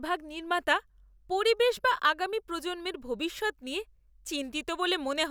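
At 3.38 s, new audio arrived late, so the device played its last 10 ms buffer once more; this repeated buffer yields a brief click in the speech.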